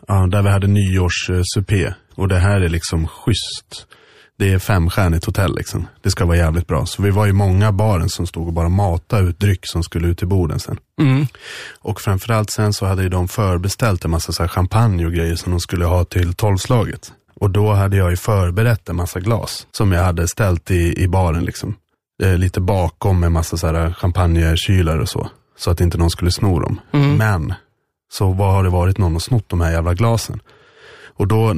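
From 0.0 to 4.0 s the adaptive stream starts at a low bitrate. The audio is dull, with nothing above 15 kHz and obvious coding artefacts, which fits roughly 40 kbit/s MP3. At 4.0 s quality jumps without a gap, consistent with a switch to 128 kbit/s.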